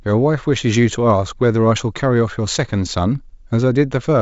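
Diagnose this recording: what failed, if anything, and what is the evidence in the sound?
Nothing stood out on listening to this speech recording over its G.722 wideband path, and no stage of the chain gives audible evidence of a failure.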